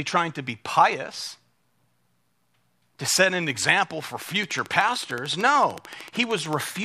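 Speech, with a train of clicks from 4.22 s to the end, just after "set an example for": regular ticks at 13.4 per second, clearly louder than the voice and continuing through pauses. The even spacing and similar shape set it apart from random crackle. The likely cause is interference or a faulty connection or power supply.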